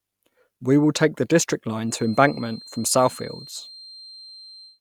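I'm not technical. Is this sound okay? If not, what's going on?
No. From 1.82 s to the end, a quiet feedback whistle near 4.2 kHz sits behind the speech, likely loudspeaker output looping back into the microphone.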